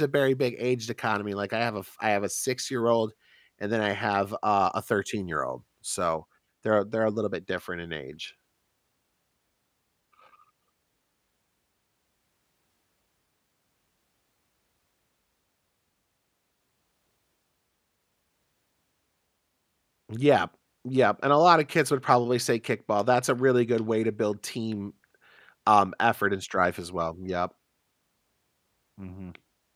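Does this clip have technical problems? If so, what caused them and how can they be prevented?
No, the speech signal stays continuous and steady throughout, with no technical faults audible anywhere in the clip.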